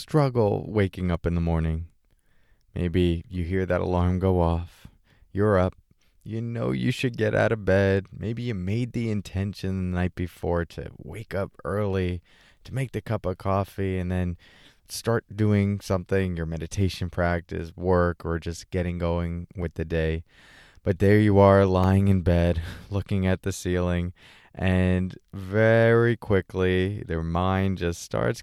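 At 10.17 s, between "the intention the night" and "to wake up early", a block of digital silence about 1.33 ms long drops the speech out. The output buffer likely went unfilled, which fits a 64-sample block. The abrupt edges give a tick. At 21.84 s, after "there you are", a 0.67 ms gap clicks similarly.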